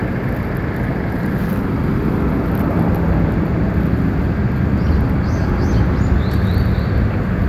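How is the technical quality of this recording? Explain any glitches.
No technical faults can be heard anywhere in this recording. The audio holds steady throughout, with no glitches to explain.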